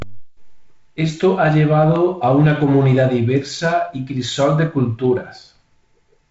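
No faults are audible; the speech carries the band-limited character of G.722 wideband coding, with nothing above about 7.7 kHz and a light graininess from the codec that fits the 48 kbit/s mode.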